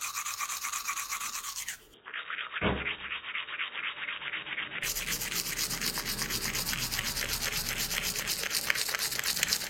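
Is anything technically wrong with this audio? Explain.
Yes. From 1.94 to 4.83 s the sound turns dull and boxy, with nothing above 3.8 kHz, a drop of roughly 5 dB and a faint new noise floor. There is no gap at the switch. This is likely an input switched to a poorer, narrower-band device, then back.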